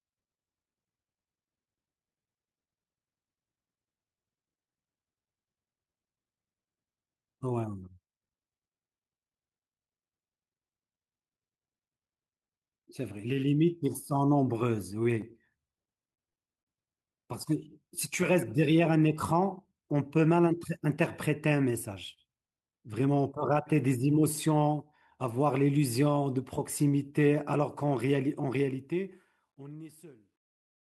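Short stalls from late packets occur at 15.03–15.08 s and 22.13–22.20 s in this speech recording. Each time a packet arrived late, the jitter buffer ran dry, so the receiver held the last sound for about 17 ms and then 35 ms before resuming where it left off, with nothing lost. Short concealed packet loss occurs at 16.14–16.20 s and 16.29–16.37 s. Each time, 40 ms of audio never arrived, and the decoder bridged the gap by extending the preceding sound for about 33 ms and 43 ms, which gives a brief smear or wobble. The audio went over a call path with a band limit near 12 kHz.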